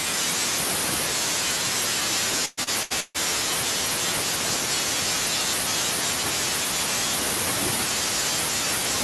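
Speech, with repeated stalls (stutter) between 2.45 and 3.17 s. Four times in that span the jitter buffer ran dry because packets arrived late or too slowly. The receiver bridged each wait by extending the last sound, for about 0.37 s in total, roughly half the span. The longest hold runs 142 ms. Nothing is lost, but the delivery drags and stutters. The call-codec coloration, with top end limited near 12 kHz, points to Opus.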